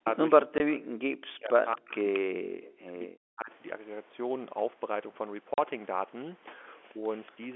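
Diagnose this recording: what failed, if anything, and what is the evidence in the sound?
Speech suppressed in double talk, at the call-processing stage: the level sinks at 0.00–0.06 s, 0.42–1.95 s, 2.17–3.51 s (each by about 40 dB) and 6.93–7.02 s (about 15 dB). The likely cause is an echo canceller that cannot separate talker from far-end echo.

Echo leak, also at the call-processing stage: a delayed copy arrives 230 ms behind the original at 0.06–0.15 s (about 10 dB down), 1.93–2.19 s (about 15 dB down) and 7.26–7.32 s (about 35 dB down). It is likely residual loudspeaker pickup the canceller missed. A discrete repeat at a fixed delay sets it apart from room reverberation.

Packet loss filled with silence, at the network stage: holes at 0.58–0.60 s (20 ms) and 5.54–5.58 s (40 ms), which fits one and two lost 20 ms packets. The gaps are fully silent, with hard edges.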